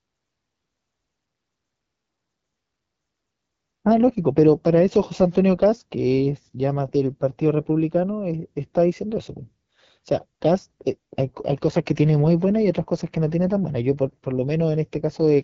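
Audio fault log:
throughout AMR wideband (HD Voice) codec. The speech sounds rough and raspy, fitting a low 8.85 kbit/s mode. Nothing remains above about 7.4 kHz.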